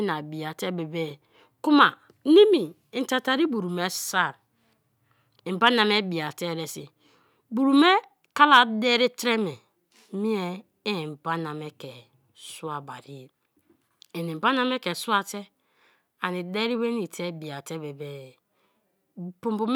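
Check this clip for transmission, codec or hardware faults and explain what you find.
Across the whole recording the speech signal stays intact and continuous, with nothing in it that points to a problem introduced by transmission, encoding or the recording hardware.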